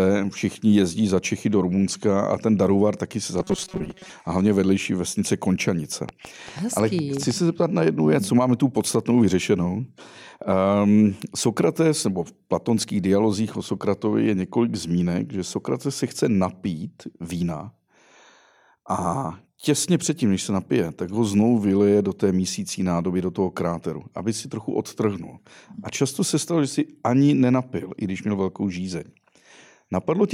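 Speech runs with two distinct faults. From 3.40 to 4.13 s, just after "taky si za", the voice turns into a rigid metallic buzz at 188 Hz, the robotic sound from repeated short buffers. It is likely caused by audio arriving late, with roughly half the sound replaced by repeats of a slice about 5.3 ms long. Unlike a steady hum, the buzz still tracks the rough shape of the words. From 6.09 to 7.32 s, just before "se zeptat na jednu", a train of clicks ticks over the sound: around ten near-identical pulses at about 6.6 per second, irregularly spaced and peaking about 10 dB above the signal. The likely cause is interference from nearby equipment or a faulty connection or power supply. Their matching shape sets them apart from random crackle.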